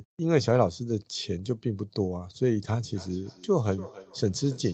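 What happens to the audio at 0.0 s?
Nothing goes wrong at 0.0 s; the speech starts intact, carried through the call's Opus path with its content held below 8 kHz as that codec setting normally does.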